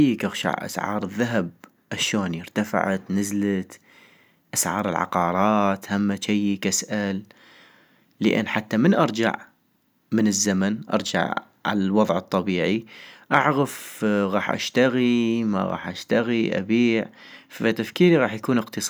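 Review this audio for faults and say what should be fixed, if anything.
Nothing stood out on listening, so there is nothing here that needs fixing.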